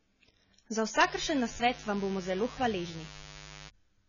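A short speech recording carries AAC compression damage throughout: the sound is dull and smeared, with a warbly fizz on sibilants. Nothing reaches above 7 kHz, and the heavy damage points to a low bitrate around 16 kbps, likely from AAC-LC encoding. On a spectrogram the energy stops flat at 7 kHz, with patchy gaps in the upper bands. From 1.03 s to 3.68 s a raspy mains buzz sits about 15 dB below the speech. Spikes repeating at twice the 50 Hz mains rate, as from a dimmer or rectifier, spread harmonics upward. On a spectrogram this shows as evenly spaced horizontal lines at 50 Hz multiples, and the waveform carries regular sharp ticks.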